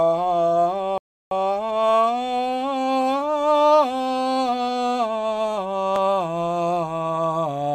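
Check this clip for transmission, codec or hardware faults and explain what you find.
One fault stands out in this music: a rebuffering stall from 0.98 s to 1.31 s. The player ran through its downloaded audio and halted until more data arrived, so the music drops to silence for about a third of a second (333 ms added) and then carries on exactly where it paused. Unlike a packet-loss dropout, no music is skipped; the passage simply starts late, stretching the clip's timing.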